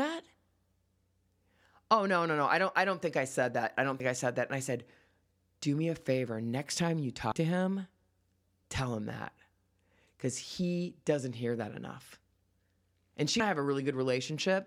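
At 4.0 s (after "said that I don't"), 7.32 s (after "time you") and 13.4 s, the speech jumps ahead about 40, 100 and 70 ms, likely dropped buffers (overrun), seen as waveform discontinuities with vertical spectrogram lines.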